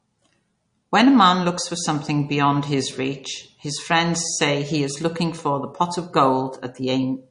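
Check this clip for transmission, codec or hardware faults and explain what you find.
One codec fault runs through the whole clip. MP3 compression, throughout: the likely cause is an MP3 encoder short of bits, which fits a rate near 40 kbps. It cuts everything above 10.1 kHz and drops weak frequency lines frame to frame, leaving the speech plainly watery and swirly.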